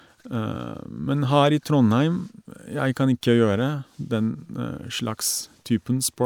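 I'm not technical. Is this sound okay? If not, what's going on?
Yes, nothing wrong can be heard anywhere in this speech recording.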